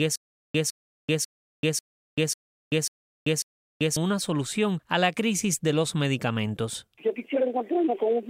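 From the very start until about 3.97 s, a 157 ms burst of sound repeats seven times at an even 544 ms pace, each followed by 387 ms of dead digital silence. This stutter with silent gaps likely comes from a stalled stream replaying its last fragment, losing the intervening audio.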